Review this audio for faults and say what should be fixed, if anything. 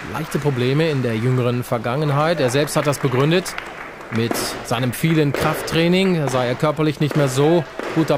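Nothing stood out on listening to this audio, so there is nothing here that needs fixing.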